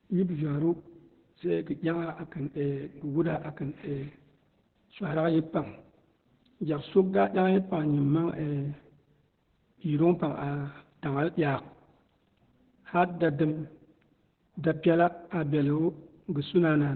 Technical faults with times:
0.00-16.96 Opus voice compression

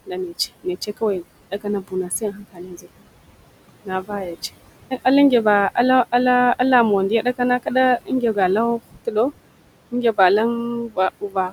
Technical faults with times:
0.00-11.53 noise suppressor artifacts
0.06-3.11 speech cut by the noise suppressor
3.69-4.43 speech cut by the noise suppressor
8.02-8.37 speech cut by the noise suppressor
8.82-9.16 speech cut by the noise suppressor
9.92-10.19 speech cut by the noise suppressor
10.56-11.53 speech cut by the noise suppressor

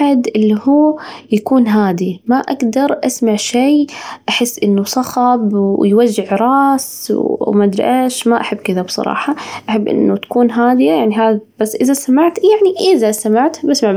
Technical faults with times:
none

